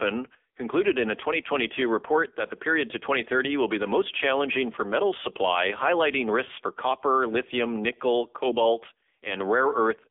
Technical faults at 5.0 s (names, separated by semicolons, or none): AMR narrowband mobile codec